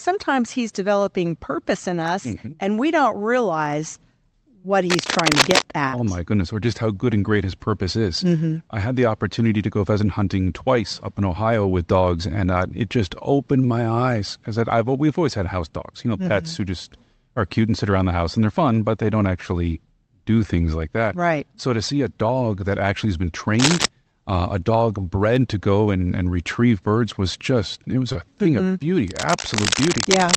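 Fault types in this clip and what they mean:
Cable scratch noise: Heard at 4.90 to 5.62 s, 23.59 to 23.86 s, and from 29.08 s to the end. Dense, uneven bursts of scratching and rustling sit over the speech, roughly as loud as the speech itself and a little louder in the 23.6 s burst. The likely cause is a worn cable, connector or control being moved, so that its contact resistance jumps around rapidly and injects crackling noise into the signal.
Burst of packet loss: From 5.87 to 5.95 s, a run of audio failed to arrive in time. For about 52 ms the receiver extended the last sound it had and faded it down, producing a held, artificial stretch in place of real speech. Playback then picks up again about 60 ms further on, so that slice of the speech is missing and the sound jumps forward at the join.
Short concealed packet loss: At 28.13 to 28.17 s, a much smaller piece of the call reached the decoder too late. 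The receiver covered roughly 19 ms by continuing the preceding sound, synthesised from its pitch or as shaped noise, then blended back into the real audio. About 20 ms of speech is gone, heard as a brief smear or wobble rather than a clear gap.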